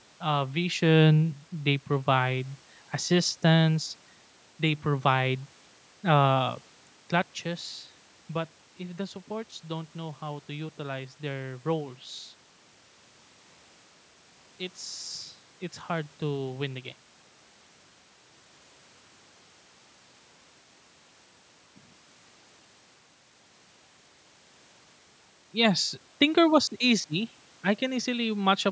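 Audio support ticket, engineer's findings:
No system fault found: call-path mic processing intact with band limit at 8 kHz, room noise as captured, and level shifts around 6.5 s and 16.5 s consistent with talker movement at the microphone.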